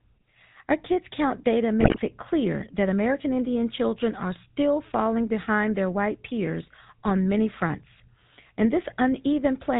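From the first moment to the end, the speech carries the gravelly, buzzy roughness of the GSM full-rate codec, plainly audible throughout and consistent with its 13 kbit/s stream. The codec rebuilds the voice from a vocal-tract filter driven by a sparse, regularly spaced pulse train, so the fine detail between harmonics is lost and the voicing takes on a rasping edge. A spectrogram shows a hard ceiling at 4 kHz with nothing above it, and the harmonics below look smeared and grainy rather than clean.

Between 1.80 and 2.00 s, just before "it clear that", GSM bit errors break the voice into a burst of squawks, pops and gargling. Corrupted filter, pitch and gain values reached the decoder, so for a few frames the spectral shape lurches and the level jumps. The sound points to a heavy error rate of around 6 percent, and the span fits roughly nine damaged 20 ms frames. On the waveform this shows as sudden amplitude spikes. 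The spectrogram shows blotchy, misplaced energy and broken harmonic lines across that fifth of a second.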